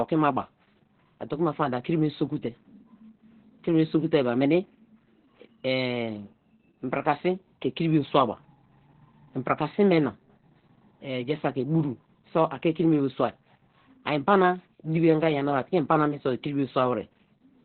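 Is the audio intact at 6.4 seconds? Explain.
No. Opus voice compression runs throughout, including at 6.4 s: the linear-prediction coder keeps nothing above 4.4 kHz, fitting roughly 8 kbps, leaving speech muffled, hoarse and robotic.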